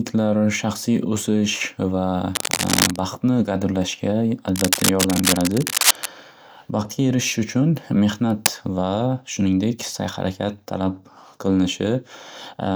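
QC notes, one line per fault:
2.35–2.99 s, 4.56–6.06 s and 8.30–8.47 s, cable scratch noise: a worn cable or connector likely being moved, so its contact resistance changes rapidly and adds dense, uneven bursts of crackle, heard as scratching roughly as loud as the speech.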